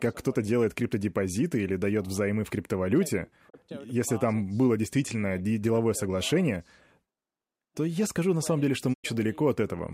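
At 3.48 s, just after "дает взаймы в криптовалюте", the speech briefly fades out over about 20 ms and falls silent until 3.56 s, resuming at "если там было действительно". A longer hole follows at 8.92 to 9.06 s, after "на самом деле что". Both are digital broadcast dropouts. The receiver muted when frames went bad, and the lost spans, 32 ms and 96 ms, fit one and three 32 ms frames. Unlike a dropout concealed by the decoder, nothing is smeared or repeated. The sound simply fades to silence and then returns, with the missing audio gone.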